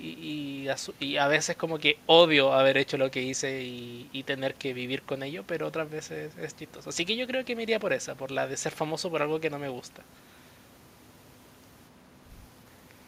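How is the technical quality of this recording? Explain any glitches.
No glitches or technical faults can be heard here.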